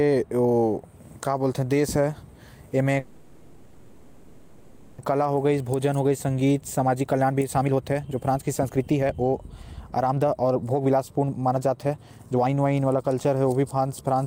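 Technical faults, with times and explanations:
2.99–5.00 s, call audio freeze: the last sound stretches into a fading buzz or hiss for about 2 s, likely from held-up packets draining the jitter buffer; speech then resumes exactly where it stopped, with nothing lost.
5.12–9.34 s and 9.97–13.44 s, jitter buffer speed-up: speech runs at about 123% and then 129% speed at unchanged pitch. Pitch-period snippets, about a second in total per stretch, are cut to shrink the buffered delay.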